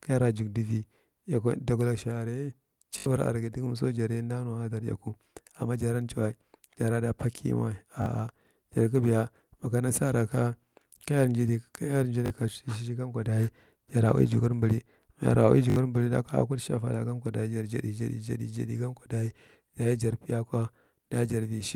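At 2.98 s, just before "aregi dogamso", a repeated buffer occurs. New audio failed to arrive in time, so the same short block replayed about four extra times, each repeat lasting about 20 ms, which fits a 20 ms buffer. It sounds like a brief buzzy stutter. The same fault returns at 8.02 s, at 12.26 s after "kayar nji", and at 15.70 s after "mayara ui". The waveform shows identical copies butted together with hard joins, and the spectrogram shows a short run of evenly spaced vertical seams.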